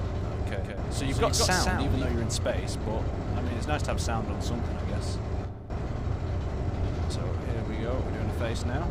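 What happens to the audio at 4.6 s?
Nothing goes wrong at 4.6 s: the audio plays through that moment intact, with no dropout, click, glitch or other fault.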